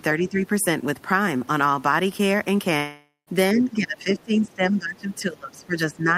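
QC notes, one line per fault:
0.19–0.43 s and 3.53 s to the end: speech suppressed in double talk. The level drops by roughly 10 dB in the first stretch and by as much as 20 dB in the second, which is likely the echo canceller turning the talker down along with the far side. The waveform envelope sags.
2.77–3.29 s: long network dropout. About half a second of audio likely never arrived. Concealment stretches the last sound into a fading buzz, followed by roughly 140 ms of silence. A smeared, decaying band and then a blank gap show on the spectrogram.
3.56–3.71 s: other side's voice leaking through. A second voice, about 15 dB below the talker, is likely residual loudspeaker echo that the canceller missed. Faint harmonic traces overlap the main speech on the spectrogram.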